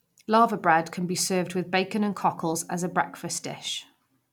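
No faults to report: the speech runs without any audible dropout, glitch or other transport or device problem.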